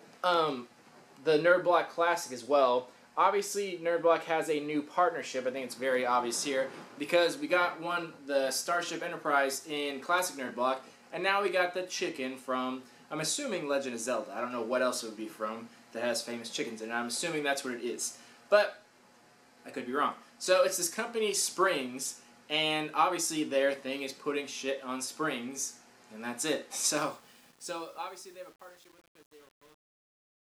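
From 26.96 s to the end at 30.52 s, the fade-out shows truncation distortion. The level stage keeps too few bits and adds no dither, which fits an 8-bit path. From 27.03 s the fading sound turns gritty. Unlike hiss or a noise gate, the grit worsens as the level falls.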